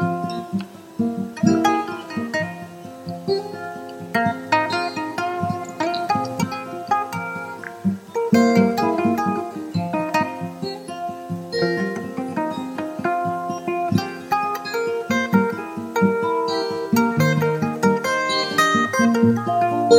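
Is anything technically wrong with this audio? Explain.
Yes. At 6.41 s the audio jumps ahead by roughly 200 ms with a brief glitch at the join: compressed frames skipped, about seven frames of roughly 23 ms never played.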